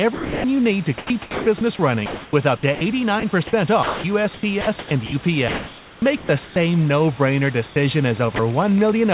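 At 0.14 to 0.44 s, sound is dropped by the voice detector. About 250 ms of speech vanishes under 300 ms of steady hiss. The sender likely judged the sound as background and stopped sending, so comfort noise played instead. At 3.83 to 4.04 s it happens again, losing about 140 ms. A 30 ms drop follows at 8.36 s.

Between 0.98 and 1.46 s, 2.06 and 3.23 s, and 4.61 and 6.56 s, the sound is chopped by the voice detector. The detector likely toggled on and off repeatedly. Quiet edges turn to synthetic noise, totalling 360, 360 and 1020 ms. The speech stutters.

From 7.67 to 7.76 s, comfort noise replaces the background. For 90 ms the real room noise gives way to a flat, featureless hiss, about 8 dB quieter. This is likely discontinuous transmission filling a pause.

A train of clicks runs from 8.0 s to the end. Pops arrive about 8 times a second, unevenly spaced, and peak roughly as loud as the speech. 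Nearby interference or a faulty connection is the likely source. Above all of this, the band stops at 4 kHz, which fits a G.711 call path.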